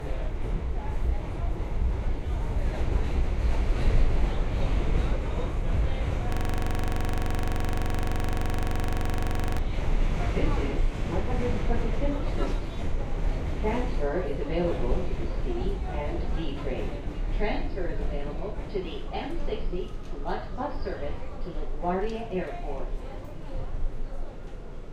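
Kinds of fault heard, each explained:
System hang loop, 6.32 to 9.58 s: the playback system froze while the audio hardware kept replaying one 42.67 ms stretch of its buffer, which fits a 2048-sample buffer. That fragment repeats exactly, 76 times, as a rapid stutter at 23.4 Hz.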